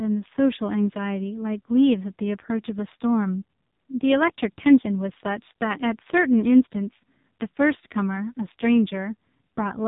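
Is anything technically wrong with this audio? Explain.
Yes. The speech runs through an AMR narrowband mobile codec for the whole clip. Nothing passes above about 3.8 kHz. Each frame is rebuilt from a vocal-tract model and a few pulses. The heavy buzzy, synthetic tone suggests a low mode near 5.9 kbps.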